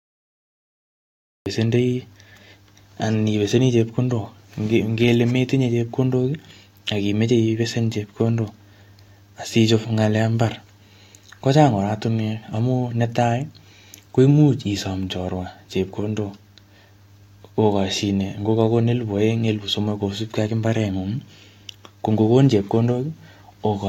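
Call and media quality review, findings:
Cut-off start, 0.0 to 1.46 s. Digital silence, then speech begins abruptly mid-sound with no natural attack or fade-in. Probable component: capture or stream start, with recording armed late relative to the talker. Waveform: flat silent line, then signal starting abruptly at 1.46 s. Spectrogram: empty, then a hard vertical edge with energy already present across the band.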